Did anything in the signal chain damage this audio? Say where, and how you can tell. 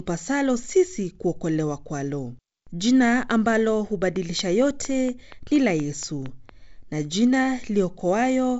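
Yes. Between 4.16 and 6.50 s there's a train of clicks, about ten near-identical ticks at a steady 4.3 per second, poking roughly 5 dB above the speech. They're evenly spaced and keep going straight through the pauses, so they aren't coming from the talker. That regular, repeating pulse points most likely to interference pickup in the analogue wiring or a faulty connection or power supply. The G.722 wideband coding, with its light hiss and nothing above 7.7 kHz, isn't what's doing it.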